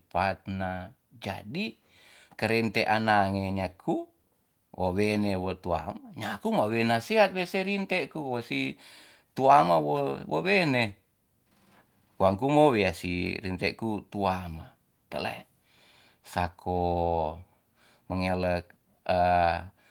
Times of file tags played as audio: none

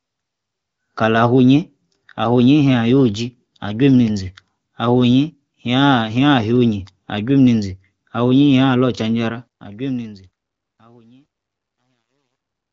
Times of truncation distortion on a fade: 9.29-12.73

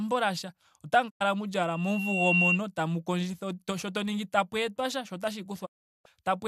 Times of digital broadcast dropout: 1.09-1.22, 5.65-6.07

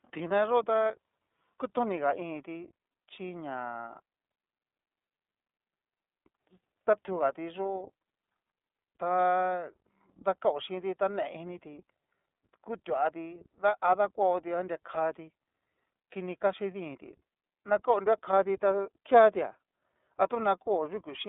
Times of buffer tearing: none

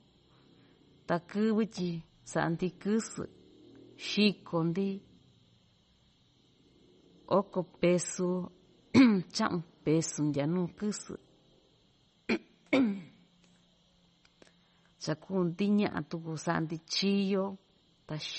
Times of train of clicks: none

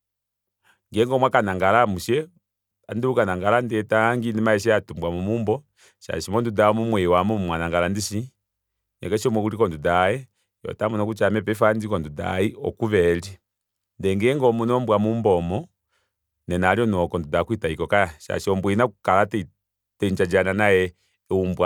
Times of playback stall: none

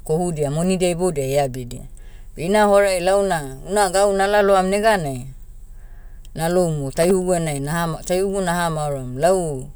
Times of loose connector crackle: 6.94-7.11

